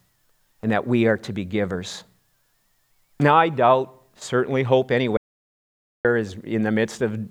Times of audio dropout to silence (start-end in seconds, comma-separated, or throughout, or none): 5.17-6.05